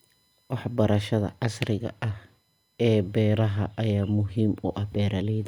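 USB whine runs throughout the speech, from start to finish: a steady, fixed-pitch tone built on 1 kHz with its strongest component at 4 kHz, the fourth multiple. The USB bus draws current in regular 1 ms frames, and that periodic load leaks into the audio path through shared power or ground. It sits roughly 45 dB below the speech, a faint, constant high whine most audible in pauses.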